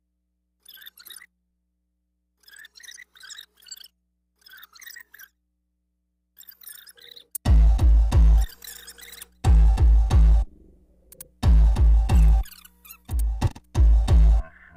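Nothing is technically wrong with the audio.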